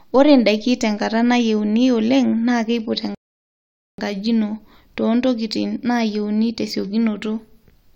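At 3.15 s the speech stops dead and silence holds until 3.98 s. That gap is a rebuffering stall. The player ran out of downloaded audio and waited for more. The speech then picks up exactly where it broke off, losing nothing but adding about 0.84 s.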